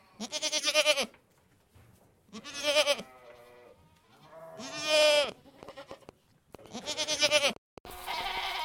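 From 5.24 s to 8.38 s a train of clicks ticks and pops over the sound: around twenty sharp, similar pulses at an uneven pace averaging 5.75 per second, each roughly as loud as the sound itself. The likely cause is interference or a faulty connection or power supply injecting pulses.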